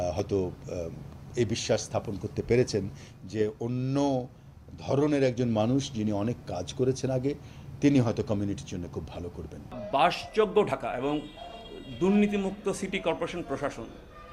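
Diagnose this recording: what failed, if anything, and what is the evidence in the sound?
Nothing in the recording points to a failure anywhere in the signal chain. No stage, from the analogue wiring through conversion, processing and storage to playback, leaves an audible mark on the sound.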